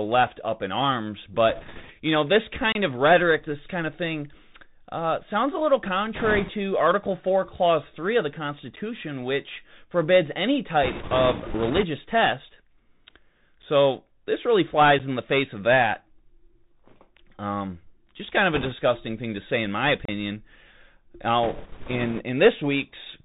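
The speech runs through a Bluetooth CVSD headset codec at 64 kbps, so nothing above 4 kHz survives, loud high sounds outrun the adaptive step size and distort, and a granular hiss sits underneath. Bit errors on the Bluetooth voice link flip a few percent of bits from 1.49 to 1.92 s, adding a rushing crackle without loud clicks. A block of digital silence at 2.72 to 2.75 s cuts the signal to silence for about 29 ms. More bit errors follow from 6.15 to 6.50 s after "uh sounds a little". A short dropout at 8.76 s, about 11 ms and consistent with a 512-sample buffer not being filled in time, gives a tick. Crackly bit errors return from 10.83 to 11.84 s. The same 11 ms dropout recurs at 13.62 s and 14.99 s. Bit errors hit 18.53 to 18.73 s, between "just kind of" and "thing to say in". A 32 ms silent hole at 20.05 to 20.09 s follows "to say in my", and a final burst of bit-error crackle runs from 21.43 to 22.21 s.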